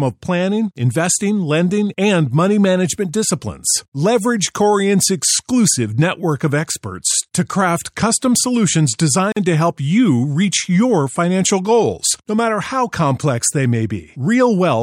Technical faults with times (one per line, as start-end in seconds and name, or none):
9.32-9.37 gap at a join of encoded pieces